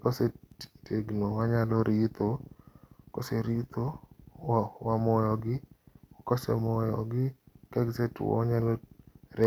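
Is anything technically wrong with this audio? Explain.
Yes. Word clock ticks run from 0.52 s to 9.44 s, roughly once a second: an unlocked digital receiver drifting about 20 ppm, slipping a single sample each time.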